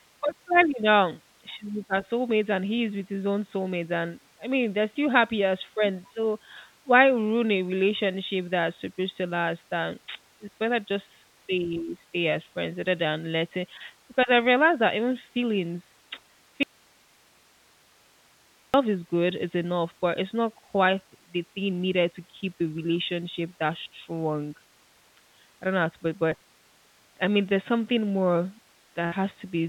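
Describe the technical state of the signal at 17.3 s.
At 17.3 s the signal path has likely lost its input. An audio dropout to a faint residue runs from 16.63 to 18.74 s, leaving only hiss about 35 dB below the speech until "is good it's enough" returns abruptly.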